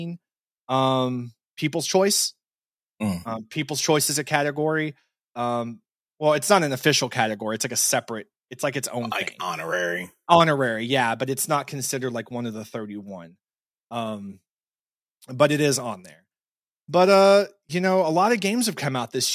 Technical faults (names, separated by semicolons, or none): none